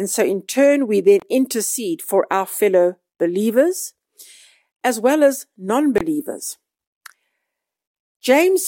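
A Bluetooth link likely failed to deliver audio packets to the headphones in time, causing two Bluetooth dropouts in this speech. About 23 ms goes silent at 1.20–1.22 s, after "so in turn we", and at 5.98–6.01 s, after "as well as non", each fitting one lost packet. The speech then resumes as if it had played on.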